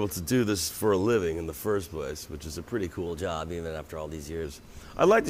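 A wrong sample rate runs from 3.06 to 4.44 s. Across that stretch, audio recorded at 44.1 kHz is played back at 48 kHz with no rate conversion. Because the samples go out faster than they were captured, speed and pitch rise together by the same ratio. The passage runs about 1.09 times too fast and sits roughly 1.5 semitones high, a lift that is modest because the two rates are close.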